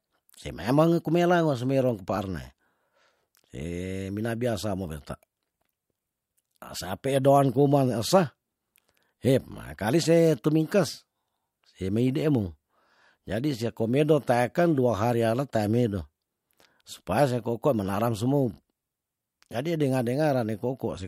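Speech recording with no technical faults to report.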